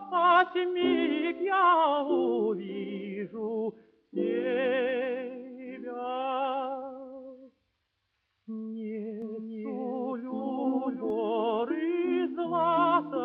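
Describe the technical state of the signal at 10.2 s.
At 10.2 s the signal sits inside a doubled audio track running from 9.22 to 11.10 s, most likely because a second, slower capture path or an out-of-step edit is feeding the same material into the mix twice. A full-band copy trails the original by roughly 0.7 s at about equal loudness, so every sound is followed by a dry, uncoloured repeat. The duplicate begins and ends abruptly at those boundaries.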